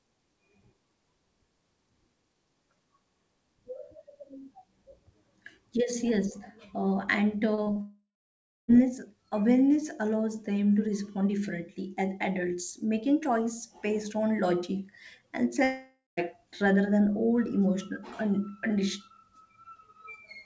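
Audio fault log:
7.55 s, 7.63 s, 7.72 s: short concealed packet loss. Three brief gaps of about 30 ms each were filled by extending the previous sound, giving quick smears and wobbles.
7.81 to 8.71 s: long network dropout. A fading buzz or hiss continues the last sound, then about 0.64 s of silence. The missing audio never returns, likely from stalled packet delivery.
15.64 to 16.20 s: long network dropout. After "based on logic and", a fading fill of about 0.53 s gives way to about 0.19 s of silence. The sound resumes at "rather than old", with the middle lost, likely from stalled packet delivery.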